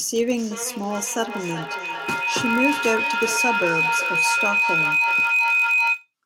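Speech clip with two faults layered on top of each other. The first is a block size mismatch (padded) running the whole way through. One stage hands over blocks shorter than the next stage reads, and the remainder gets zero-filled, so you hear a steady 43.1 Hz buzz, which fits a 1024-sample read. The slowdown is tiny at 0.999x, so pitch and pace barely shift. The second is a feedback howl from 0.37 s to 6.13 s. Two devices in the same room are on the call, and each trip around the mic-to-speaker loop adds gain. The repeats build instead of dying away and narrow to a whine around 3 kHz, with repeats roughly every 400 ms. At its loudest it sits about 3 dB above the speech.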